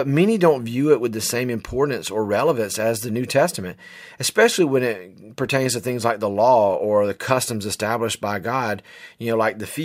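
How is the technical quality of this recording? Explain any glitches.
The technical quality of this recording is good, and there are no glitches to explain.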